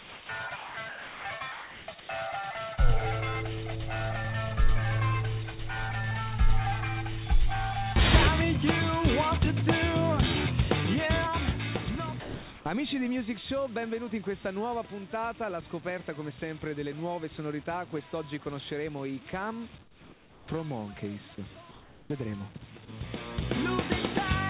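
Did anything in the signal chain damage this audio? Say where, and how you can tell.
Yes. At 0.0–0.29, 2.0–2.09, 19.82–20.48 and 21.71–22.1 s, call processing likely replaced the background with comfort noise: steady, featureless hiss, about 2–5 dB quieter. Unlike a gate, it never drops to silence.

The voice detector likely cut live sound at 0.56–0.77, 0.89–1.25, 1.52–1.88 and 12.2–12.65 s, filling it with the same smooth noise. Packet loss would leave clicks or repeated fragments instead.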